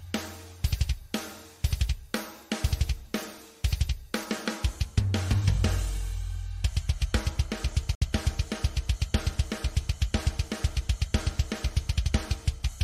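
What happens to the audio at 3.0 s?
Nothing goes wrong at 3.0 s: the audio plays through that point intact, with no dropout, click, distortion or other fault.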